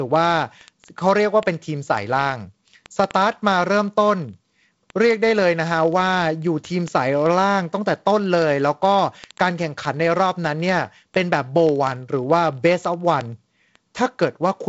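This speech clip has word clock ticks: a digital link is being read by a receiver running on its own clock rather than locked to the sender's, with a mismatch of around a thousand parts per million. Each time the two clocks slip past each other, a single sample is dropped or repeated. From 0.11 s to the very end, that produces a steady train of sharp ticks roughly every 20 ms, hundreds in all, at uneven strength. The G.722 wideband coding can be heard as a band limit near 7.7 kHz with light coding grain, which fits its 48 kbit/s mode.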